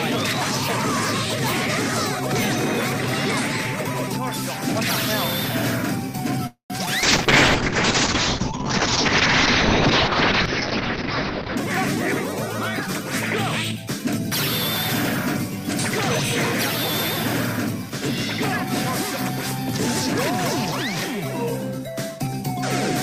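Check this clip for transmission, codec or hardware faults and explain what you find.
Five transmission faults appear, all typical of a network call under strain.

Call audio freeze, 6.47 to 6.72 s: the likely cause is delayed packets draining the jitter buffer, leaving the receiver to stretch the last sound. It fades out and is silent for about 110 ms before the audio resumes where it stopped, having been pushed about 230 ms later.

Short concealed packet loss, 6.86 to 6.89 s: roughly 20 ms of audio never reached the decoder in time. The receiver patched the hole by extending the preceding sound and blending back, giving a brief smear or wobble at that point.

Call bitrate drop, 7.04 to 11.61 s: the bandwidth estimate collapsed and the encoder went from 48 kbps down to 7 kbps, with audio bandwidth narrowing from 20 kHz to 6 kHz. For about 4.5 s the sound is muffled and coarse, even watery, until the rate recovers.

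Jitter buffer speed-up, 11.45 to 15.69 s and 21.79 to 22.43 s: excess buffered audio was trimmed by cutting out short pitch-period slices. The audio runs about 3% fast in the first stretch and 6% in the second, with pitch unchanged, so the second stretch sounds hurried.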